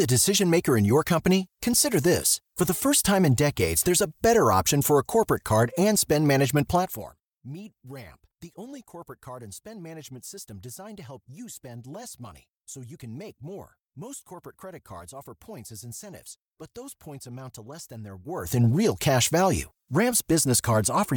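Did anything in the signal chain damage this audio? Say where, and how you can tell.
Yes. Zipper noise runs from 18.20 to 18.60 s, just before "real cash value": a gain move of about 20 dB was applied in coarse, unsmoothed steps, around 200 per second, likely per processing buffer of roughly 5 ms, each step ticking audibly.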